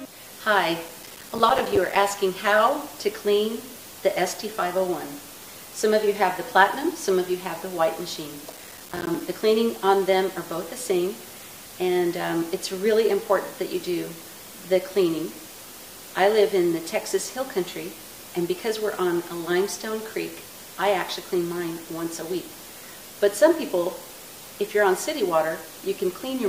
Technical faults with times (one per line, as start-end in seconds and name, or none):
0.89-1.96 processor overload crackle
8.50-9.21 processor overload crackle